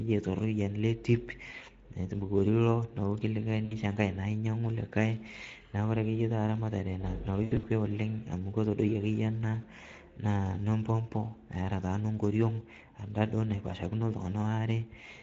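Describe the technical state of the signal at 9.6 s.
At 9.61 to 9.65 s the speech briefly smears into a stretched sound that fades, then stays impaired for a moment after. This is VoIP packet loss concealed by the speech codec: the decoder repeated its last pitch and filter at falling gain, which fits a single lost 20 ms frame.

Underneath, the speech is noisy and hoarse, with a thin, noise-like fill in the upper band. That is plainly audible Speex codec damage, where the CELP coder has too few bits for the excitation, consistent with a bitrate around 16.8 kbps.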